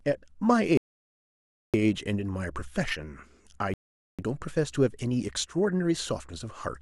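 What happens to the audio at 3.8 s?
The player runs out of downloaded audio and halts, a rebuffering stall from 3.74 to 4.19 s. The speech cuts to silence for about 0.45 s, then resumes exactly where it stopped, so nothing is lost but the clip runs 0.45 s longer.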